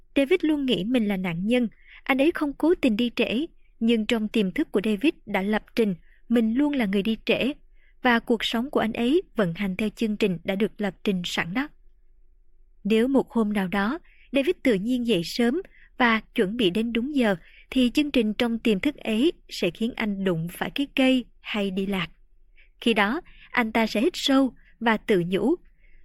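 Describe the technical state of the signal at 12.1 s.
At 12.1 s the speech signal is intact, with no audible fault at that moment.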